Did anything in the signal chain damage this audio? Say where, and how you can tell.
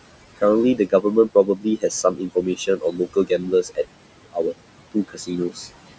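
Yes. The damage happens in the call processing stage, at the noise suppressor. You get noise suppressor artifacts across the whole clip. The room noise, sitting about 14 dB under the speech, gets pulled down by about 21 dB whenever the speech pauses and swells back up underneath it.

There's also speech cut by the noise suppressor, in four stretches: 0.77 to 1.05 s, 1.29 to 3.85 s, 4.25 to 4.54 s, and 4.92 to 5.68 s. Quiet parts of the speech dip by about 18 to 21 dB, so soft consonants and word tails come out swallowed or faint. The damage adds up to around a second in the long middle stretch, under half a second in the last one, and only brief moments in the other two. The suppressor is mistaking low-level speech for steady noise and turning it down along with the background.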